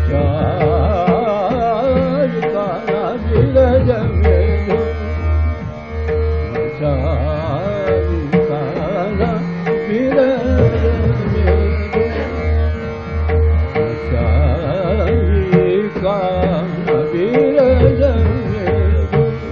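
Nothing in the signal stands out as a technical fault at any point in the recording.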